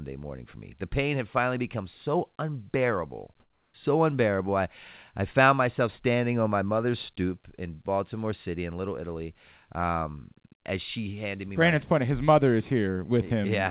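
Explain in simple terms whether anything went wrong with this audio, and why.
For about a third of a second, from 3.4 to 3.74 s, the real background drops out and a smoother, quieter noise replaces it. This is comfort noise in place of the background, likely because the sender paused transmitting and the receiver filled the gap with synthetic noise.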